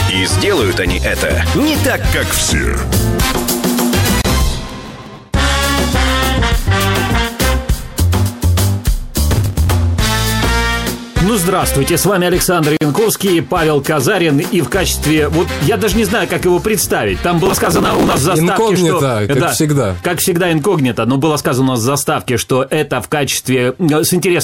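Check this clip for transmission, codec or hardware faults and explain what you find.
Two kinds of fault turn up: joins between separately encoded pieces, and processor overload.

Gap at a join of encoded pieces, at 4.21 to 4.25 s (31 ms) and 12.77 to 12.81 s (45 ms): pieces were encoded separately and joined untrimmed, so encoder start delay and end padding remain. Continuous sound drops into a brief, slightly smeared silence, then resumes where it stopped.

Processor overload crackle, at 4.85 to 5.19 s, 9.31 to 9.71 s and 17.46 to 18.19 s: the processor repeatedly missed deadlines for very short buffers, around a millisecond and a half each. The missed buffers were skipped: dozens in the first two bursts, well over a hundred in the last. Each skip leaves a hard-edged dropout, and together they form gritty crackling over the sound.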